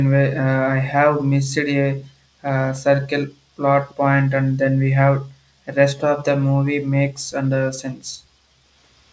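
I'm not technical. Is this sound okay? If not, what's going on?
No, there are two small glitches worth knowing about.

At 3.88 to 3.94 s there's a brief, very faint ghost of the voice trailing about a third of a second (roughly 320 ms) behind the original. That's an echo leak. It's likely that someone on the call was using a loudspeaker and their echo canceller didn't quite scrub out what their microphone picked up, so a tiny scrap of it got sent back down the line.

At 5.38 to 5.51 s the background sound in the room drops away almost to silence for a moment, roughly 150 ms, then comes back. This is background gated by the echo canceller. While the loudspeaker was playing, the canceller clamped the microphone down hard to keep echo out, and it took the room sound with it until it let go.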